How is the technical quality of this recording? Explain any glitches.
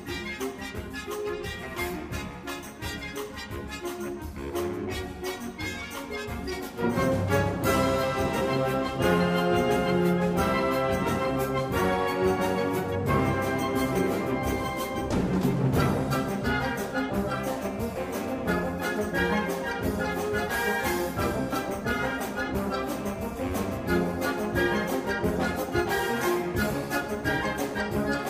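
Nothing stood out as a problem on listening, and no glitches caught my ear.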